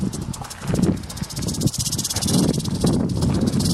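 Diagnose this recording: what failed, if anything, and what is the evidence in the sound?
The failure sits in the codec stage: compressed frames skipped. At 3.57 s the sound jumps forward by roughly 300 ms, which fits several whole frames of about 32 ms each being dropped before decoding. A network dropout or buffer underrun would instead leave a gap, silence or repeated audio, not a leap ahead in time.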